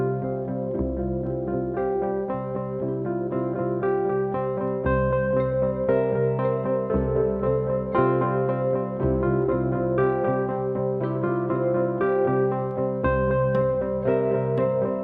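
Nothing here calls for comment, since no technical faults turn up anywhere in the recording.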